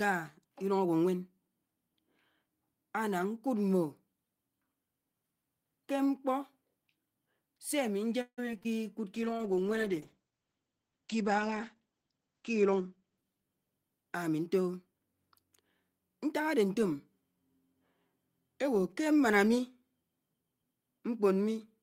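Choppy speech breaks up between 8.21 and 8.75 s, with four short holes, the longest 163 ms, and nearly half of that stretch filled in. This is repeated packet loss (robotic sound): the receiver kept stretching the last received sound to cover missing packets, and 60 ms still dropped out entirely. From 9.15 to 14.50 s the voice turns rough and muffled, losing everything above 8 kHz where it had reached 20 kHz, and it is at its coarsest for about 3.7 s. That is a call bitrate drop, which fits the encoder falling from 32 to 11 kbps and coding more coarsely until it recovers. Inside that stretch, from 12.17 to 13.25 s, the talking sounds hurried at an unchanged pitch, running at about 114% speed. This is a jitter buffer speed-up, in which the receiver cut roughly 150 ms of pitch-period slices to shed excess delay.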